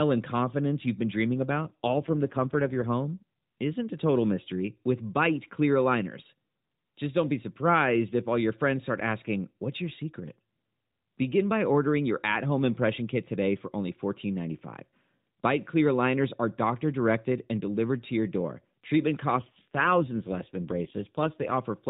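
Just after "confidence you've been dreaming", from 1.39 to 2.86 s, and again from 19.32 to 21.56 s, an AMR rate drop makes the speech buzzier and more synthetic, which fits a 12.2 to 5.9 kbps switch. The narrowband stays, with no gap, unlike a dropout or bandwidth change.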